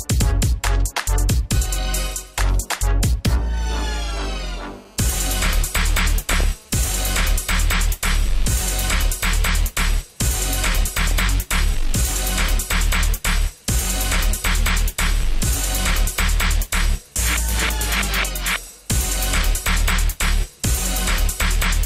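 From 4.12 to 6.69 s there's a GSM phone buzz: a nearby phone on a call is bursting at 217 Hz, and the audio circuitry is rectifying those pulses. You hear a steady, raspy buzz full of harmonics, sitting about 32 dB under the audio.

Near the end of that buzz, at 6.23 to 6.44 s, the DAB burbling starts, and it comes back at 10.95 to 11.31 s, 17.59 to 17.86 s and 19.56 to 19.76 s. Weak reception let a fraction of a percent of bit errors slip past error correction into the MP2 data, so wrong samples put short blips of noise into individual sub-bands.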